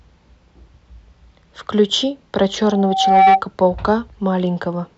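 From 2.63 to 3.42 s a 770 Hz tone swells over nearly the whole span into a squeal well above the speech: loudspeaker feedback squeal, the microphone re-amplifying its own loudspeaker.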